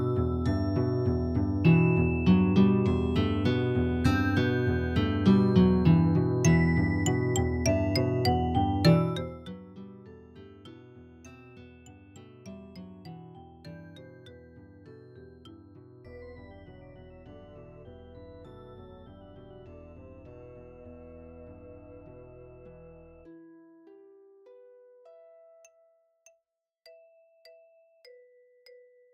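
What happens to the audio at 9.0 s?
Zipper noise runs from 8.9 to 9.6 s, while the level falls by roughly 25 dB. Instead of a smooth fade, the gain drops in steps of about 1 dB, around fifty times a second, with no smoothing between them. Each abrupt jump puts a tiny discontinuity into the waveform, and those repeated small clicks merge into a rapid ticking, zipping texture that rides on the sound for as long as the level is moving.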